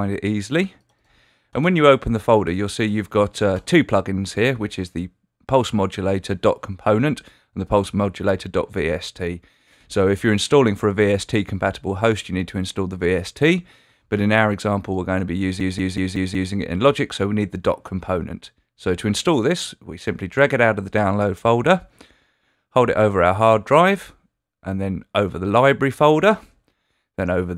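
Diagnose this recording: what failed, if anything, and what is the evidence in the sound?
From 15.60 to 16.53 s, one short fragment repeats exactly, five times over, at about 5.4 repeats per second, a mechanical stutter rather than a buzz. This is a system hang loop at the driver or buffer stage. The host or driver stopped supplying new data while the sound hardware kept replaying the same ring buffer. Each cycle lasts 185.76 ms, which fits an 8192-sample buffer. Essentially no audio appears to be missing once the loop releases.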